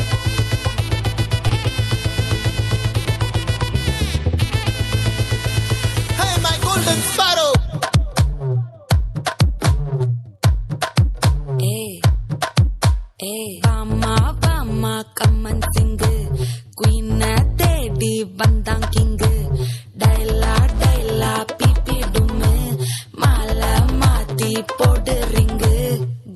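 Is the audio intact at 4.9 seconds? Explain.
No. At 4.9 s the audio sits inside a jitter buffer speed-up running from 4.16 to 5.48 s. The receiver's buffer had built up excess delay, so it trimmed it by cutting short pitch-period pieces many times in a row, removing roughly 150 ms in total. Playback runs at 112% speed with the pitch unchanged, so the passage sounds hurried. On a spectrogram the harmonics keep their frequencies while events crowd closer in time, and the waveform shows tighter spacing with small splices at period boundaries.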